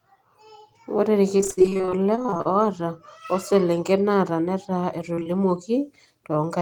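A speech clip with two bursts of packet loss. From 1.37 to 2.47 s there is repeated packet loss with a robotic sound. Twenty-three separate gaps, the longest 40 ms, cut out about 460 ms of the original signal. The receiver patched each hole by extending the preceding sound, so concealment fills 38% of that stretch, giving a choppy, robotic texture. On a spectrogram the harmonics there look frozen and smeared in short repeating blocks, and the waveform shows abrupt seams between real and synthesized segments. Later, short concealed packet loss hits three back-to-back 20 ms frames starting at 5.15, 5.19 and 5.23 s, ending near 5.27 s. Each lost frame was bridged by continuing the previous sound and then blending back into the real audio, which leaves a brief smear or wobble. A spectrogram shows a narrow patch of stretched, slightly blurred energy, and the waveform shows a short repetitive segment with soft joins at its edges.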